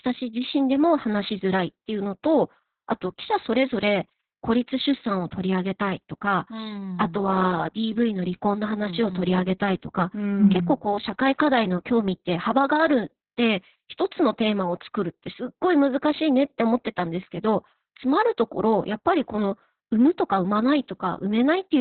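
Opus voice compression runs through the whole clip, with heavy damage. The encoder sits in its SILK linear-prediction mode at narrowband, so nothing survives above about 4.2 kHz and the speech sounds muffled and boxed-in. Coarse coding of the excitation signal makes the speech hoarse and faintly robotic. The level of damage fits a bitrate around 6 kbps, the kind of starved setting that forces both the narrow band and the crude excitation.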